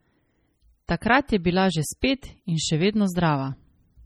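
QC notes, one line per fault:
Throughout: MP3 compression. The speech has a dull, band-limited top end with a watery, swirling texture, and s sounds break into metallic chirps while consonant onsets smear. The likely cause is heavy MP3 encoding, which fits a starved bitrate near 32 kbps. The encoder removes the treble above a fixed cutoff and discards weak spectral lines, and those lines appear and vanish from frame to frame, which creates the warble and chirping.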